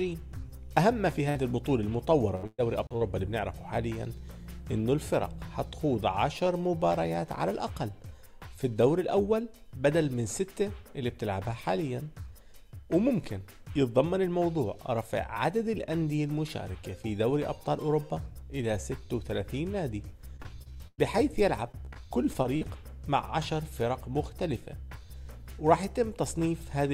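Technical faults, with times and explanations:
1.29–1.37 s, burst of packet loss: A short run of lost or late packets left a hole of about 60 ms. The receiver filled roughly 57 ms by extending and fading the last sound, and the audio then resumes slightly further on, with that section missing.
2.35–3.03 s, repeated packet loss (robotic sound): Four separate gaps, the longest 116 ms, with about 260 ms of audio missing. About 30% of the span is patched by repeating the preceding sound, so playback turns choppy as each patch gives way to the next loss.
2.87–2.91 s, CD skip: A mute of around 40 ms, after which playback resumes from a different point. This is the laser jumping to another turn of the disc's spiral, which happens here inside the packet-loss stretch.
20.37–21.00 s and 21.72–22.66 s, repeated packet loss (robotic sound): Two more choppy runs. The first has four gaps, the longest 104 ms, with about 27% of its span concealed. 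The second has seven shorter gaps of at most 44 ms, with about 15% concealed. Each run loses 160 ms of audio.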